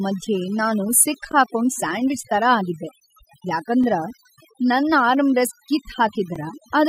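From the start and throughout, overdone noise removal strips the background down, leaving twinkling specks. An over-aggressive noise suppressor is gating individual frequency bands, so a spectrogram shows isolated speckles across a blank floor and ragged, hollowed-out speech harmonics.

At 1.32, 3.84 and 6.36 s, overlapping chunks produce brief clicks or stutters 2.5 s apart. Each processing chunk starts 20 ms before the previous one ends, so that sliver plays twice. The waveform shows a small duplicated segment and a discontinuity at each join.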